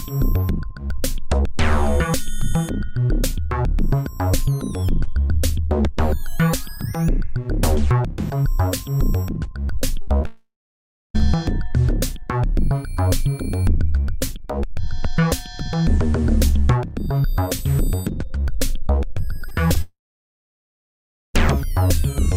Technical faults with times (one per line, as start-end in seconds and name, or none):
10.01-10.09 burst of packet loss
10.17-10.26 short concealed packet loss
10.26-11.21 long network dropout
19.41-19.77 repeated packet loss (robotic sound)
19.81-21.36 long network dropout